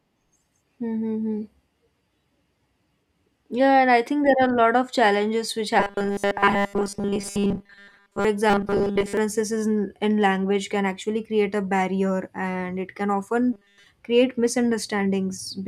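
A speech clip with robotic sound from repeated short buffers in three places. The first runs from 5.80 to 8.25 s, just after "lot of challenges which". The second runs from 8.50 to 9.17 s, ending before "in in language can". The third runs from 13.53 to 13.86 s, after "barrier and it can". Each stretch turns the voice into a rigid metallic buzz at 200 Hz. That pitch fits a 5 ms slice being looped. The likely cause is audio arriving too slowly, so the player repeats its last buffer. In the first two stretches, roughly 70 percent of the sound is repeated. The third is entirely repeated.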